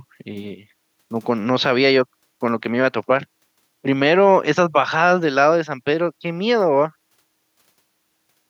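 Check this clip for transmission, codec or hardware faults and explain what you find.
Nothing in this speech stands out as a transmission, codec or hardware problem; there's simply nothing to flag here.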